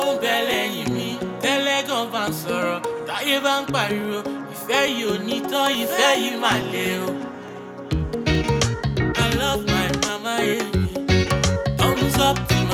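From 0.54 s to 12.69 s, a click recurs every 0.87 s, about fifteen in all. These are likely clock drift buffer slips: two clocks differing by roughly 700 ppm force a few dozen samples to be dropped or repeated each time. The strict regularity separates them from random dropouts.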